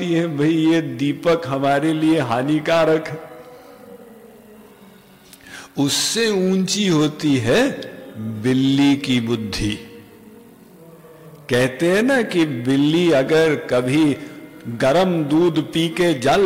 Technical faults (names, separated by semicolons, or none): hard clipping